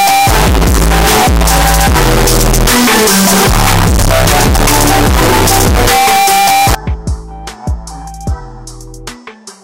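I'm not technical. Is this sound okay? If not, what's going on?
No. From the start to about 6.75 s, the audio was likely stored as 32-bit floating-point numbers but played back as if they were 32-bit whole numbers, a fault called float read as integer. Each sample's value then comes from the wrong part of the number, so the wave turns almost square and sits at an almost fixed, high level regardless of how quiet it was. The result is very loud and harsh, with background noise as loud as everything else, though the pitch can still be followed.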